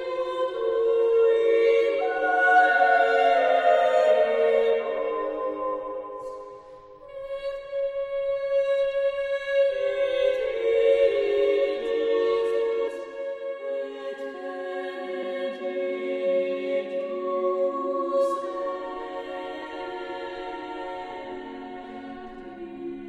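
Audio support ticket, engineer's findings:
Compressed frames skipped at 12.87, 15.22, 19.61 and 21.83 s. Audio jumps forward at each point, dropping roughly 300 ms, 150 ms, 150 ms and 200 ms of material, which fits whole 26.1 ms codec frames missing from the file or rejected by the decoder as damaged. Joins are short smeared blips, not clean clicks, since overlapping neighbour frames blend across the gap. Check file integrity and the decoder's error handling.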